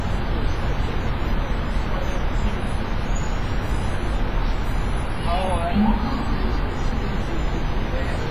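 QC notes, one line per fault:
Throughout, WMA compression: a low-bitrate transform encoder, likely WMA at around 24 kbps, quantises each long block coarsely and discards weak components, so the sounds ring and wash with a breathing hiss, heavily smeared, and nothing remains above about 15.3 kHz.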